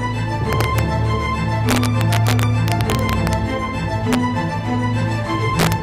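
Integer overflow appears at 0.53–0.79 s (about 1 dB over), 1.69–3.33 s (about 3 dB), 4.13–4.15 s (about 2 dB) and 5.59–5.73 s (about 3 dB). Peaks that should have been limited wrap to the opposite sign, so they crack rather than flatten as clipping would.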